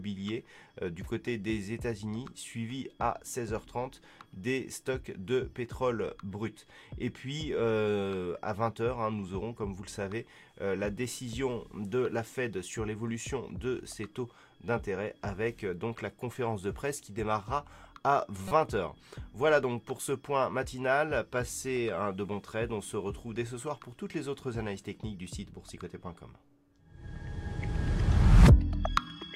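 At 18.48 to 18.52 s a corrupt frame was decoded: a short run of compressed data, likely a few consecutive frames, arrived with flipped bits and was played rather than concealed. The misread gains and codes put energy at frequencies that don't belong there, giving a brief chirpy burst peaking around -25 dBFS. Unlike a click, it is not a single discontinuity. It is a wrongly coloured blip lasting about 36 ms.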